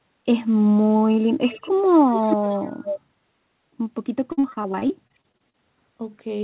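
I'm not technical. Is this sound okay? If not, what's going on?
No. Echo leak shows up from 1.46 to 1.73 s and again from 2.11 to 3.0 s: a quieter, delayed copy of the voice trails about a third of a second behind. Most likely the other side used a loudspeaker and its echo cancelling let some sound slip back into the microphone.

Repeated packet loss (robotic sound) runs from 4.32 to 5.55 s. Pieces of audio went missing 13 times, each gap at most about a twentieth of a second. The call filled each hole by stretching the last sound, so about a quarter of that stretch is patched, giving a choppy quality.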